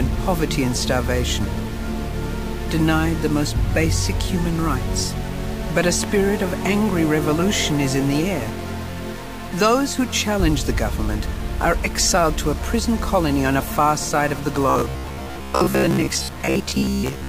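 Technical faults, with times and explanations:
Throughout, stuck bit: distortion covers the whole clip and the quiet gaps fill with noise, likely from one converter bit held fixed.
14.70–17.29 s, robotic sound from repeated short buffers: a rigid metallic buzz at 66.7 Hz, likely a 15 ms chunk replayed in place of most incoming audio.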